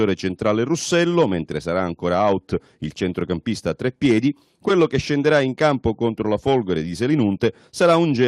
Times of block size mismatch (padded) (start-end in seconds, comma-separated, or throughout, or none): none